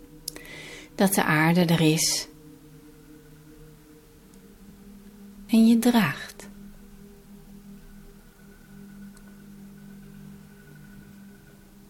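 The audio has two abrupt jumps forward in the sound, at 2.18 s and 5.49 s, the second skipping a longer stretch. With no silent gap, this points to a likely dropped buffer (overrun), where unread samples are overwritten and the surrounding audio is spliced directly together.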